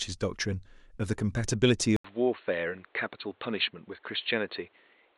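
Speech. At 1.96 s, after a gap of 80 ms, the sound turns dull and boxy. Nothing passes above 4.3 kHz, the level drops by about 5 dB, and faint new background noise appears. Likely cause: input switched to a poorer device.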